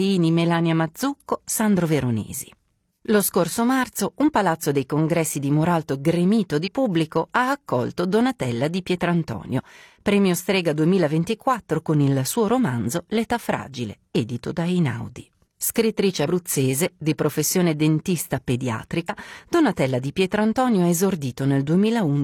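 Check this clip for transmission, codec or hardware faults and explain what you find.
Three short faults show up, all damaged data in a compressed stream, at 6.64 to 6.70 s, 16.24 to 16.28 s and 19.05 to 19.10 s. Corrupted bytes make the decoder misread frames and lose sync while it searches for the next header, producing a brief chirp, squawk, click or short hole each time.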